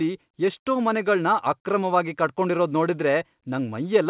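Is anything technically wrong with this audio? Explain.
No, nothing technically wrong can be heard here.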